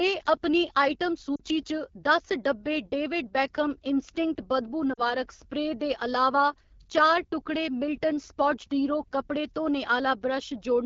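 AMR wideband (HD Voice) codec runs throughout this speech, and the roughness and rasp point to one of its lowest modes, around 8.85 kbit/s. The codec models the voice up to 6.4 kHz from sparse pulses and fills the top band with shaped noise, so detail turns grainy and harsh.

Lost AMR speech frames occur at 1.35 to 1.41 s and again at 4.93 to 5.01 s. Each gap lasts about 40 ms, which fits two dropped frames. The decoder repeats its last pitch and vocal tract settings at falling gain, so the sound drops to near silence within the two frames before the voice returns rough.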